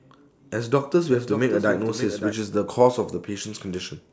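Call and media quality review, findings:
Doubled audio track, 1.10–2.32 s: speech likely captured twice, with a second, slower path or an out-of-step edit layered in. Full-band copy trails by about half a second, roughly 10 dB quieter, dry, cutting in and out abruptly.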